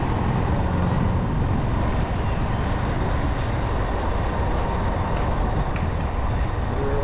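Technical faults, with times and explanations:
No technical faults can be heard in the audio. It has come over a WebRTC call path that is working as it should, and nothing sounds above 4 kHz, which points to a G.711 A-law telephone codec.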